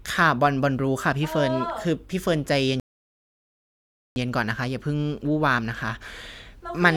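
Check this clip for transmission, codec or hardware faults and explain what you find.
There is one fault, a rebuffering stall. From 2.80 s to 4.16 s the player runs dry and stops. The speech falls silent for 1.36 s, then resumes exactly where it paused.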